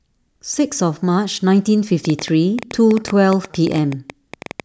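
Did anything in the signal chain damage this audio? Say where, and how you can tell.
Yes. A train of clicks runs from 2.05 s to 4.61 s, about 30 short pulses at an average of 9.8 per second but unevenly spaced. They share much the same shape and peak about 5 dB above the speech, so they tick through the pauses as well as over the voice. The likely cause is electrical interference picked up in the analogue wiring ahead of the converter, injecting the same pulse repeatedly.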